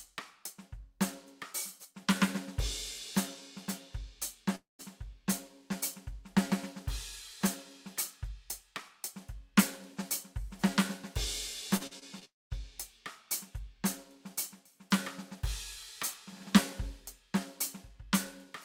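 This music clip has a gap from 4.55 to 4.81 s and another from 12.25 to 12.53 s, each a fading buzz or hiss then silence; both are likely a long network dropout. From 11.77 to 12.23 s, repeated packet loss (robotic sound) leaves four short concealed holes, the longest 41 ms, giving a choppy texture.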